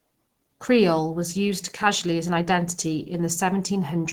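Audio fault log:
Throughout, Opus compression: the speech is plainly muffled and hoarse, with a grainy, rough texture. This likely comes from Opus running in its hybrid speech mode at a low rate, around 16 kbps. With so few bits, detail is coded coarsely.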